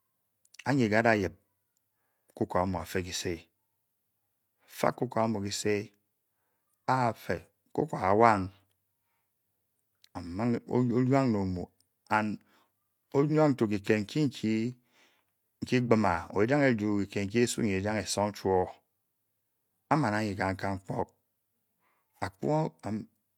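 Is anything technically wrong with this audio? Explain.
No, nothing is technically wrong with this audio.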